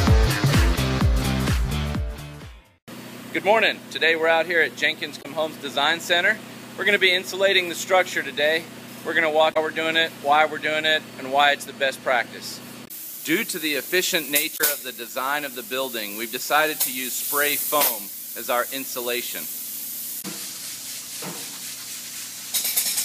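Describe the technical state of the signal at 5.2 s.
At 5.2 s the signal carries damaged data in a compressed stream, spanning 5.19 to 5.26 s. Corrupted bytes cause the decoder to misread frames, lose sync and hunt for the next valid frame header, producing a brief chirp, squawk, click or short hole of about 70 ms.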